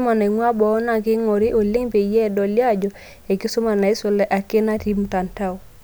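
Recorded speech with no audible technical faults.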